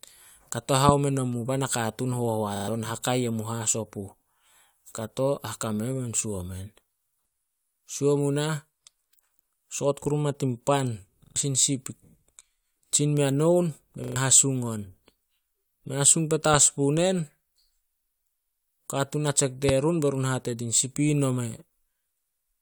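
At 0.89 to 0.91 s comes a loud pop, about 20 dB above the speech. It is likely a voltage spike, such as a switch or static discharge. A repeated buffer follows at 2.56 to 2.68 s. One short slice sounds four times with hard joins, which fits a 40 ms buffer. This stutter replaces about a tenth of a second of speech. The same stutter returns at 11.24 to 11.36 s and 14.04 to 14.16 s. Another pop, about 10 dB up, lands at 16.54 to 16.56 s. A third, about 20 dB up, hits at 19.69 to 19.71 s.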